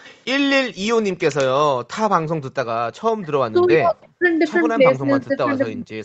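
At 0.04 to 0.18 s a faint delayed copy of the speech, trailing by about 0.32 s and far below the direct level, is likely an echo leak: the far end's echo canceller let loudspeaker pickup through. The fixed delay sets it apart from room reverberation.

The background is gated by the echo canceller three times, at 0.69 to 0.82 s, 1.75 to 1.89 s and 2.24 to 2.43 s. Each time the room noise drops by about 40 dB for roughly 150 to 200 ms and comes back. Only the background dips. The speech stays whole, which separates this from double-talk suppression.

From 3.21 s the speech itself is pulled down, most likely by double-talk suppression when both sides talked at once. At 3.21 to 3.25 s there is a shallow dip. From 3.44 to 4.22 s the speech is cut almost to silence. A fainter echo leak, again about 0.32 s behind, surfaces at 3.95 to 4.02 s. Suppression returns at 4.97 s and lasts to the end.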